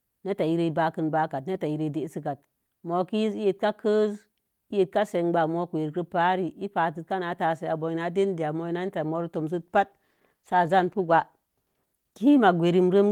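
Right after "a moi netta moro", at 9.57 s, the speech turns coarse and rough, losing detail for about 2.6 s before clearing at 12.27 s. This is a call bitrate drop. The call's bandwidth estimate fell, so the encoder was told to spend far fewer bits and coded the speech more crudely. The degradation fits a fall from around 32 kbps to roughly 17 kbps, with quality returning once the bitrate recovered.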